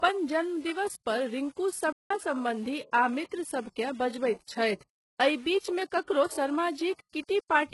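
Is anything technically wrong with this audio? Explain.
Yes. This speech recording has three problems: grainy quantisation distortion, codec damage throughout, and one dropout.

Low bit depth without dither runs through the whole clip. The grit points to samples rounded to roughly 7 bits with no dither. Because the rounding error follows the waveform instead of forming a smooth noise floor, quiet stretches and decaying syllables turn rough and sputtery. The distortion sits only around 30 dB below the speech.

HE-AAC compression also affects the entire clip, and the damage is heavy. It fits a very low bitrate around 12 kbps. The codec likely kept only the lower spectrum and rebuilt the treble by copying lower bands upward under a coarse envelope. That synthetic top end doesn't line up harmonically with what lies below it, so s sounds and other sibilants come out gritty, metallic or lispy.

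A playback stall runs from 1.92 to 2.11 s, right after "जन्मदिवस पर रिंकू". The output goes silent for about 0.18 s, consistent with the player running short of data or its thread being blocked, and the speech then resumes with "सम्बन्धी आ मित्रसभ के". The flow of speech is clearly broken mid-phrase.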